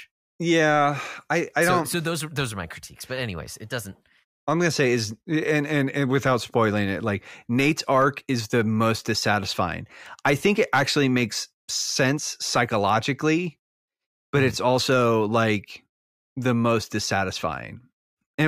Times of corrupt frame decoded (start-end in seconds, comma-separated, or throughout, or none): none